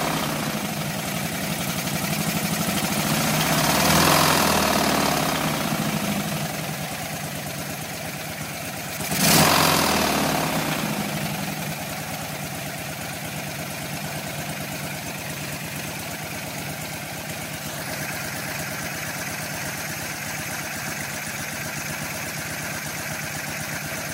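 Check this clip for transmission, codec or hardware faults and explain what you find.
One hardware fault shows up: USB whine. From 16.76 to 20.39 s, a steady whine sits on a 1 kHz base, strongest at 3 kHz. It comes from USB frame current leaking through power or ground, about 35 dB below the sound.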